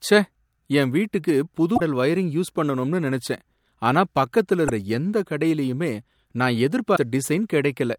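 Damaged data in a compressed stream breaks the speech at 1.74–1.80 s, after "என் வீட்டுக்கு புது"; at 4.65–4.70 s, after "பண்ணனும்னு நினைச்சேன் ஆனா பக்கத்துல"; and at 6.93–6.99 s, after "கடையிலயுமே நான்". Each time, corrupted bytes make the decoder misread frames and lose sync, producing a short glitch of 50–62 ms.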